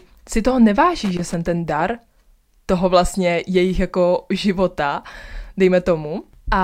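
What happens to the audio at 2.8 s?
Nothing goes wrong at 2.8 s: the speech runs through that moment intact, with no dropout, click, glitch or other audible fault.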